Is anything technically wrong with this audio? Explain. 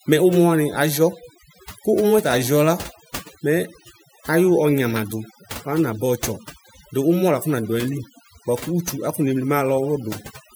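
Yes. Overdone noise removal runs through the whole speech clip. A noise reduction stage set far too aggressively pulls individual frequency bands down whenever they sit close to its noise estimate, and the softer parts of the speech get swept away with the noise. The pauses collapse to near silence dotted with twinkling, chirpy specks. On a spectrogram the background shows as scattered isolated dots, and the speech harmonics look patchy and gapped.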